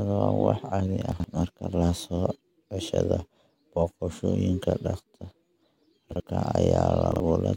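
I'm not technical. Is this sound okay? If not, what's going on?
No. There are chunks out of order around 1.12 to 1.24 s, 6.12 to 6.2 s and 7.12 to 7.2 s: tiny 40 ms bits of speech play a beat late, so you hear quick jumbled hiccups.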